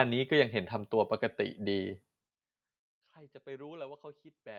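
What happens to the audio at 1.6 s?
Nothing goes wrong at 1.6 s: the speech carries on intact there, with no drop, glitch or sudden level change.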